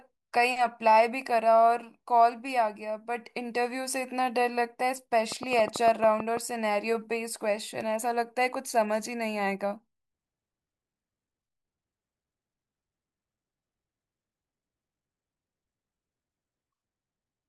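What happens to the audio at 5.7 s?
A train of clicks runs from 5.32 to 6.38 s, so 5.7 s falls in the middle of it. About ten clicks arrive at roughly 8.6 per second, unevenly spaced. Each has much the same sharp shape and peaks well above the level of the speech. It sounds like a burst of uneven ticking laid over the speech. The likely cause is interference from nearby equipment or a faulty connection or power supply injecting repeated pulses.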